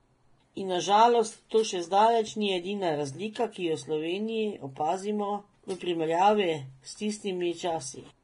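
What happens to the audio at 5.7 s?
The speech at that moment sounds hissy and grainy, with nothing above 10.6 kHz, as it does for the whole clip. This is likely heavy Vorbis compression at a bitrate that sounds near 29 kbps, where coarsely quantised treble detail is replaced by noise.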